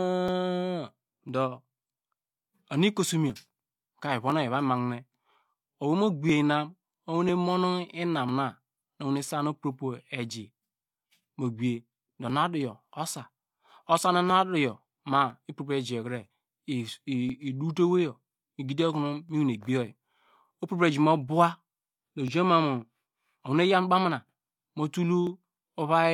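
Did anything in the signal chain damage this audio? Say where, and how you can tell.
Yes, at the driver or USB stage: periodic USB or driver dropouts, ticks every 1.0 s from 0.28 to 25.27 s, where roughly a millisecond of speech gets skipped each time.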